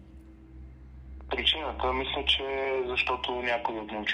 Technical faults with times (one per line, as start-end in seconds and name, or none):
1.21-4.04 train of clicks